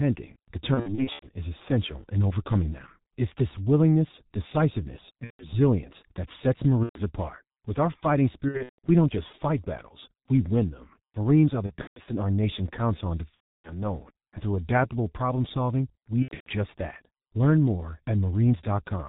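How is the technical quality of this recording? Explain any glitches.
The technical quality is poor: heavy low-bitrate codec damage runs through the whole speech clip, and seven bursts of packet loss break it up.

The G.723.1 codec colours everything. The dull, narrow sound fits a rate near 6.3 kbit/s. Content above 4 kHz is missing, so the speech is muffled. The codec's voice model is updated only once per 30 ms frame, which makes the tone hoarse and smears consonants together.

VoIP packet loss concealed by the speech codec occurs at 0.74–1.28 s, 5.24–5.52 s, 6.83–6.98 s, 8.48–8.78 s, 11.66–12.01 s, 13.34–13.86 s and 16.22–16.51 s. Gaps range from 120 ms to 300 ms, with the longest at 13.34 s. Several bursts are scattered, with runs up to 150 ms. With packets missing, the decoder repeats its last pitch and filter at falling gain, so the speech is stretched into a fading buzzy tone or coloured noise. 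It stays weak or distorted briefly afterwards.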